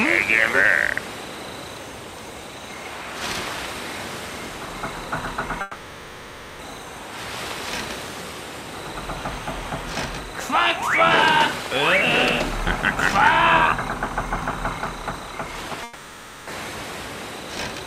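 At 5.61 s the sound turns into a fading, buzzy continuation lasting about 1.0 s, to 6.61 s, and again from 15.83 to 16.49 s, about 0.64 s. This is likely a long network dropout, with the receiver stretching out the last audio it had before jumping ahead without the lost stretch. A spectrogram shows smeared, repetitive bands in place of normal detail.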